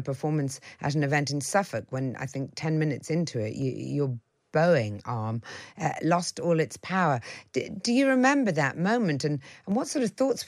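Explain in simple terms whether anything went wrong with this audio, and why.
Four sharp little clicks break into the speech, at 1.79, 3.62, 5.94 and 9.72 seconds. They're likely dropped samples: a tiny sliver of the recording, a fraction of a millisecond, went missing, so the waveform jumps abruptly and snaps audibly.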